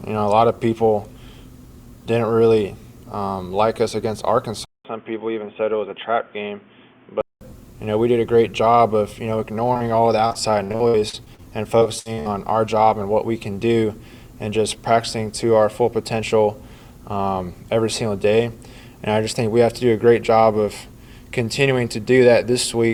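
At 4.65 s the sound suddenly goes dull and boxy, after a short silence of about 200 ms. That's most likely the input switched to a poorer device, probably another mic or a headset's call profile. Nothing comes through above 3.5 kHz, the level drops a few dB, and a new noise floor appears well under the signal, roughly 35 dB down. It stays that narrow and muffled until about 7.41 s.

Around 9.73 to 9.83 s there's a quick smear where audio went missing and got patched over. It's short concealed packet loss, two holes close together. About 16 ms and then about 31 ms were filled by stretching what came just before, so you get a little wobble rather than a clean gap.

Then it gets rougher. From 10.27 to 11.42 s there's repeated packet loss, and it sounds choppy. Holes keep landing one after another, the longest about 60 ms, and roughly 30 percent of that stretch is concealment rather than real audio. 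After a short break it comes back from 11.79 to 12.28 s and is worse, with about 42 percent of that stretch patched and gaps up to about 62 ms.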